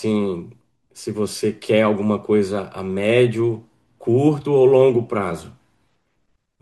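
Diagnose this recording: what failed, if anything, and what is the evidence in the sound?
Nothing appears to have failed here: the speech comes through without any audible sign of trouble at any stage of the chain, so there's no fault to diagnose.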